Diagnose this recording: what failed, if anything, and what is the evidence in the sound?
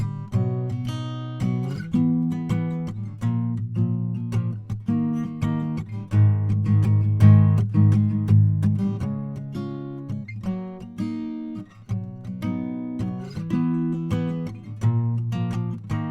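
At the network stage, a slowed connection dropped the adaptive stream to a lower bitrate from 5.30 to 7.30 s; the music's quality changes suddenly and codec artefacts rise, with no gap.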